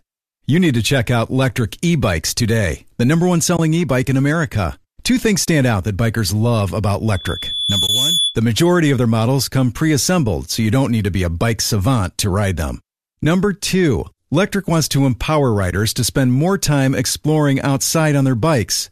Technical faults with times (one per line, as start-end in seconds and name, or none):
3.56-3.59 AAC frame loss with muting
5.45-5.48 AAC frame loss with muting
7.13-8.38 loudspeaker feedback squeal
7.87-7.89 AAC frame loss with muting
13.23 AAC frame loss with muting
15.71-15.73 AAC frame loss with muting